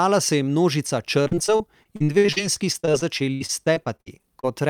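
From 1.23 s to 4.46 s the speech turns choppy and robotic, with small pieces dropping out, the longest hole about 60 ms. This is repeated packet loss (robotic sound): about thirty gaps arrive in quick succession, and each is patched by stretching the last bit of sound forward, roughly a quarter of the span in total. Because the next hole follows soon after each patch, the repeated fill gives the mechanical tone.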